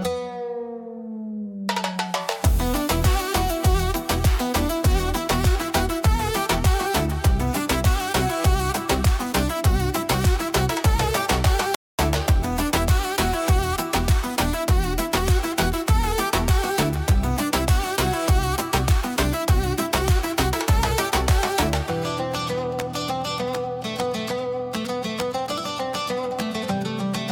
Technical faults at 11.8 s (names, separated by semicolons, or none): playback stall